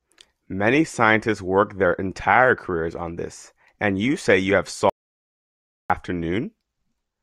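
At 4.90 s, just after "you say you have", the speech drops out to silence for about 1.0 s, returning at 5.90 s. This audio dropout to silence is silent with no room tone, and likely a lost input link or stray mute while recording continued.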